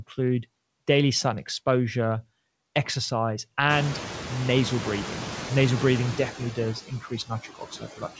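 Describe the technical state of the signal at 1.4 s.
A noise suppressor is working on the signal at 1.4 s, as it does across the whole clip. Frame by frame, it pulls down the bands it judges to be steady background, by about 16 dB, so the noise sinks in the gaps and comes back up under the speech. The call path cuts off everything above 8 kHz, which fits a G.722 link at 64 kbps.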